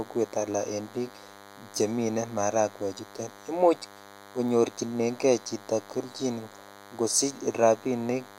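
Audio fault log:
Throughout, DECT cordless phone buzz: a thin, steady, rasping buzz with a 100 Hz fundamental and a dense stack of harmonics sits under the speech at roughly 20 dB below it, and it continues through the pauses. A nearby DECT handset or base station transmits a short radio burst every 10 ms. The audio circuitry rectifies each burst into a sharp pulse, and that pulse train is the harsh, bright buzz heard here.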